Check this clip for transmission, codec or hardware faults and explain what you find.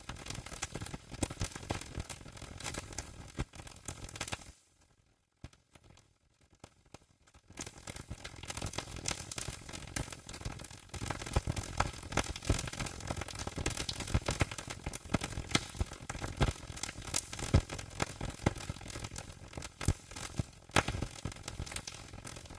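No transmission, codec or hardware faults turn up in this clip.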